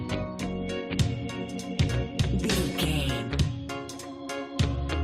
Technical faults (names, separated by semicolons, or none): none